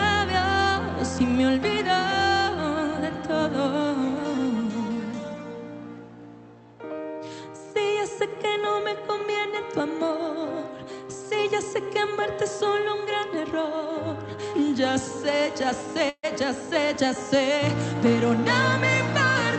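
The audio passes through an Opus call path with its top end capped near 8 kHz. At 16.09 s there is a call audio freeze lasting until 16.25 s. The last sound is stretched into a fading buzz for about 0.14 s, then drops briefly to silence. Playback then resumes exactly where it stopped. Nothing is lost, but everything after runs about 0.14 s late. The likely cause is delayed packets draining the jitter buffer.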